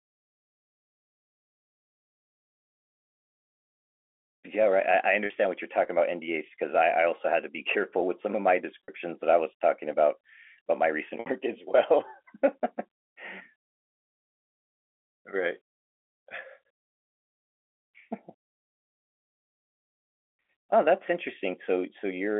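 It's a speech recording on a telephone line, with the narrow 300 Hz to 3.4 kHz band you'd expect from G.711. The trouble is packet loss with pitch repetition in three spots: 5.26 to 5.30 s, 8.84 to 8.88 s, and 11.20 to 11.26 s. Each time about 40 ms, then 40 ms, then 60 ms of audio went missing (which fits a couple of 20 ms packets, then three), and the receiver patched the hole by looping the last pitch period, so you hear a brief held, buzzy smear before the voice picks up again.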